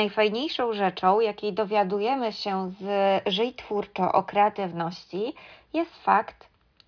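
No technical faults are audible anywhere in the recording.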